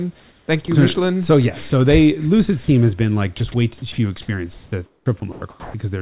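At 0.66–0.68 s, just before "you so", at 1.70–1.72 s, and at 2.64–2.68 s, just before "has been like", sound is dropped by the voice detector. Each is a single 20 to 40 ms hole filled with steady comfort noise, likely because the sender's detector mistook the sound for background. Unlike chopping, each is one clean switch off and back on.

From 3.38 to 3.98 s, after "has been like", and from 4.54 to 5.74 s, sound is chopped by the voice detector, likely from the detector switching on and off repeatedly. About 140 ms and then 740 ms of speech give way to comfort noise in two or more pieces across each stretch. Throughout the clip, the call path's narrow band stops at 4 kHz.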